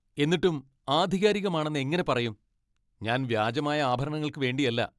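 No dropouts, clicks, distortion or level jumps turn up anywhere in this speech recording.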